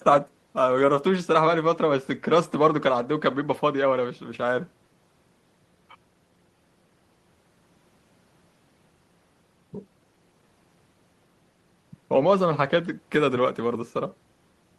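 No technical faults can be heard anywhere in the speech recording.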